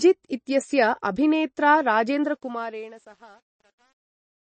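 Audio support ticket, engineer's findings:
Likely MP3 compression at a low bitrate, around 28 kbps. Encoder drops weak frequency lines frame to frame and cuts treble at 8.3 kHz. Plainly audible watery, swirling texture throughout, dull top end, smeared attacks.

Truncation distortion on a fade, 2.25 s to end of clip, just after "इत्यस्य अभिनेत्रा". Fade or gain stage keeps too few bits, no dither; resolution near 9 bits. Waveform steps coarsely, giving gritty, grainy decay, worst from 2.72 s onward.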